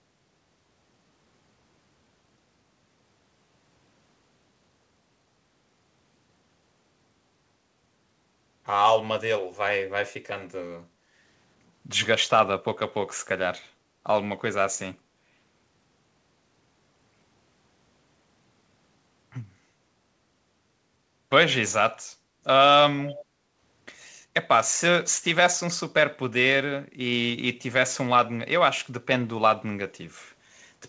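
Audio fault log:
23.02–23.25 s, echo leak: The far end's echo canceller most likely failed to fully suppress what its microphone picked up from its loudspeaker, so part of the returned signal came back down the line. The result is a faint, delayed copy of the speech trailing the original by about 390 ms, sitting roughly 15 dB below it. It is brief, heard as a ghostly repeat, with the same 8 kHz band limit as the rest of the call.
23.27–23.56 s, background gated by the echo canceller: Immediately after the leak, the echo canceller clamped down on the microphone while the loudspeaker was active, pulling the room sound down with it. The background ambience dips by about 6 dB, at its deepest, for around a third of a second. It then recovers once the canceller releases. The effect is a short hollow pause in the room tone rather than a full silence, audible as the noise floor briefly sinking and returning.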